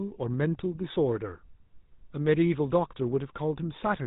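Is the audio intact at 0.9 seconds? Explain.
No. At 0.9 s, as throughout the clip, the speech has passed through the GSM full-rate codec, which fits its 13 kbps rate. The codec models the vocal tract and excites it with sparse regular pulses, discarding everything above 4 kHz, so the speech sounds dull, plainly buzzy and gravelly.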